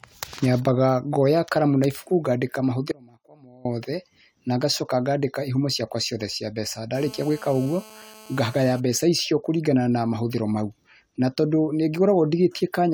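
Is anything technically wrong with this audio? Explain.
Yes, there are two problems. From 2.92 to 3.65 s the speech cuts out abruptly for about 0.74 s. It isn't a pause or a fade, and only a faint trace remains, roughly 25 dB below normal. That's likely an audio dropout to a faint residue, where the signal was lost but the path after the break stayed live.

Then from 6.95 to 8.8 s there's GSM phone buzz: a harsh, raspy 217 Hz drone with lots of harmonics, sitting about 23 dB under the speech. A nearby 2G phone on a call was bursting 217 times a second, and the audio circuitry rectified those pulses. Because it was a call, the buzz is nearly steady.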